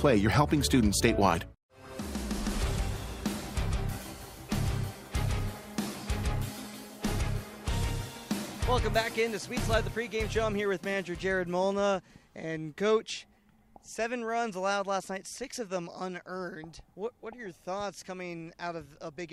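No technical faults are audible anywhere in the audio.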